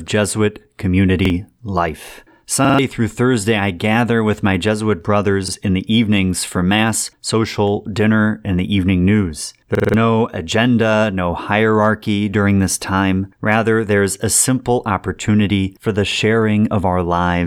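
Five repeated-buffer stutters turn up in this speech, at 1.25, 2.65, 5.48, 9.75 and 16.12 s. Each time fresh audio didn't arrive in time, so the device replayed its last chunk, about 46 ms long, which fits a 2048-sample buffer. You hear the same fragment looping with a hard join: one extra pass at 1.25, 5.48 and 16.12 s, three at 2.65 s and four at 9.75 s, where roughly a fifth of a second of speech drops out.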